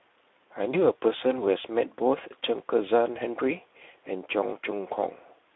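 Right from the start the whole clip carries Speex codec damage, and it's plainly audible. The speech sits inside a narrow phone-style band, roughly 300 Hz to 3.6 kHz, so there's no air on top and not much body underneath. Within that band the CELP coder is short of bits for the excitation, so voiced sounds come out grainy and hoarse with a noisy edge, which fits a rate of around 11 kbps.

At 0.71 s there's a VoIP packet loss concealed by the speech codec. What sounds like a single lost frame, about 20 ms of audio, is filled in by the decoder, which keeps extrapolating from the last pitch and filter it had and turns the gain down as it goes. You hear a short stretched sound that fades. Because each frame builds on the one before, the sound stays thin and off until about 0.78 s.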